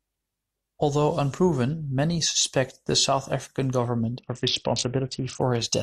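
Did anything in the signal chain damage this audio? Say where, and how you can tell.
Yes. The damage is at the codec stage, on the Bluetooth link carrying this speech. From 4.18 to 5.41 s there is a Bluetooth SBC bit pool drop. The treble goes dull and a gritty, grainy noise sits on the sound. Both clear when the rate recovers. That points to the bit pool falling from 31 to about 6, near 55 kbps. With so few bits, the top sub-bands get almost nothing. The lower bands are quantised coarsely, which causes the grit.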